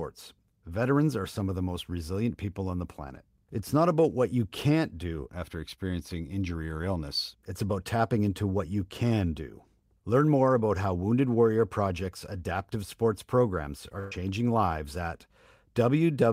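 Speech with one burst of packet loss at 13.99 to 14.12 s: about 120 ms went missing, so the last sound is held and fades. On a spectrogram this shows as smeared, flat content that decays before the speech resumes further on.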